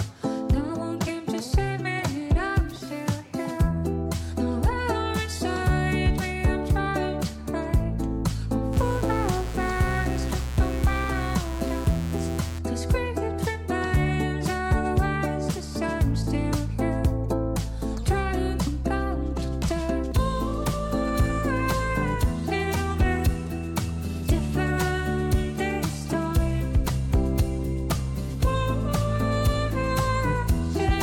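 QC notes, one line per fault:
8.73–12.59 s, mains buzz: a steady, raspy buzz rides under the sound at roughly 15 dB below it. Switching spikes from a dimmer, rectifier or unshielded path arrive twice per 60 Hz cycle, spreading harmonics of 60 Hz up into the kHz range, which gives the tone its edge.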